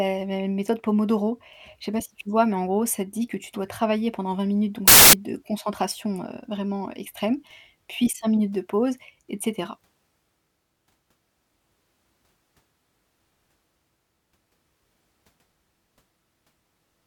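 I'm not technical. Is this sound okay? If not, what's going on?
No. From 4.88 to 5.13 s the speech turns into a burst of loud hiss. These are samples built from the wrong bytes: the player assembles each sound value from mismatched pieces, so tiny fine details become huge jumps, heard as loud, harsh noise.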